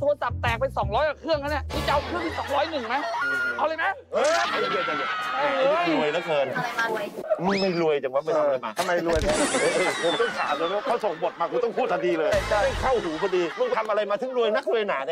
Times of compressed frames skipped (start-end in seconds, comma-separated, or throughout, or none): 3.21, 4.44, 6.88, 12.31, 13.72